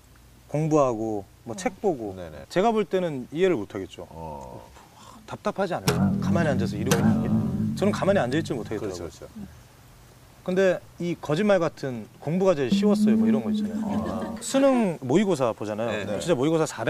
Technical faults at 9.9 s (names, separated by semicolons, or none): none